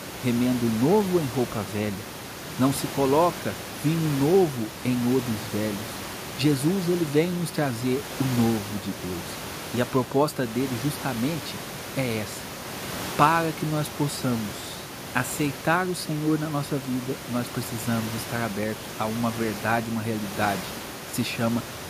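No system faults are audible in the speech; the only background is room noise sitting about 10 dB below the voice, which belongs to the recording itself.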